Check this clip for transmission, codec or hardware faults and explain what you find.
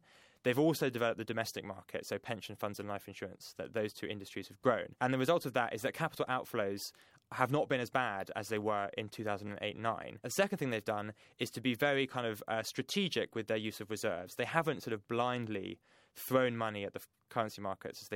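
One transmission fault is present. Chunks out of order at 9.47–9.49 s: one 10 ms chunk arrived late and played after its successor. This produced a brief jumbled moment, seen as three abrupt waveform discontinuities and vertical spectrogram lines.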